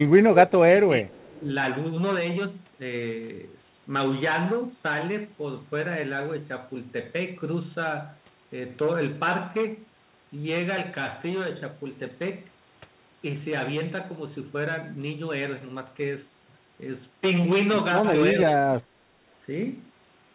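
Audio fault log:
0.29–1.17 s, 1.33–1.49 s and 18.37–18.87 s: speech suppressed in double talk. The speech dips by about 20 dB, about 10 dB and about 25 dB. It stays dipped for roughly 0.7 s, 0.15 s and 0.3 s. The echo canceller likely turned the talker down while the other side was also speaking.
1.21–1.33 s: echo leak. A faint delayed copy of the speech appears, about 35 dB below it and 378 ms late. It is likely loudspeaker sound that the other side's echo canceller did not fully remove, sent back down the line.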